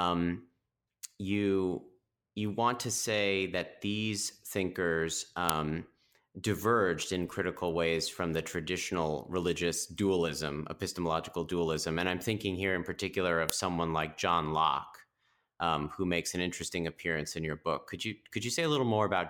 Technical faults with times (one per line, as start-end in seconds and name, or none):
5.49 file header played as audio
13.50 file header played as audio